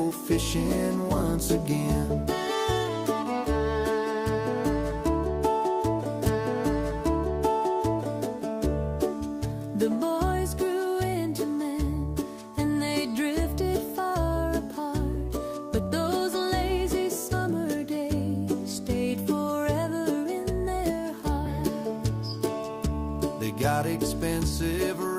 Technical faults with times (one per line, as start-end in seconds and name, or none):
6.25-8.25 stream segment repeated